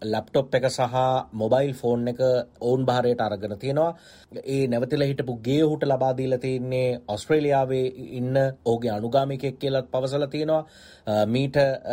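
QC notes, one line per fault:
No faults detected in this clip.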